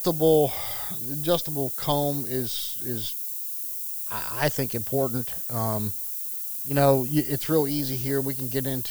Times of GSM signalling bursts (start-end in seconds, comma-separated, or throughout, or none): none